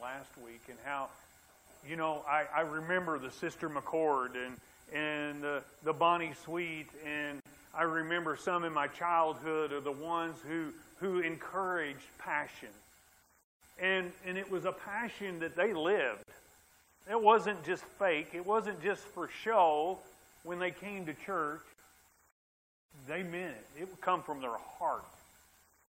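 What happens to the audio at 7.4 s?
At 7.40 s the sound drops into a gap at a join of encoded pieces, a gap of about 53 ms lasting until 7.46 s. Two separately encoded segments were butted together with the encoder's start delay and final-frame padding left in. The edges are smeared by the codec, and the sound resumes where it broke off.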